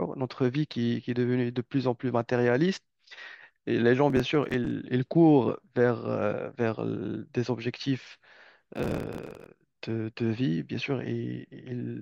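The processor fell behind its audio deadlines twice, leaving processor overload crackle from 4.10 to 4.71 s and again from 8.75 to 9.47 s. Buffers only a few milliseconds long went unfinished and were skipped, so each miss cuts a tiny hard-edged gap into the speech. The misses come in rapid runs, about twenty in the first burst and many more in the second, which is heard as gritty, tearing crackle that stops when the load passes.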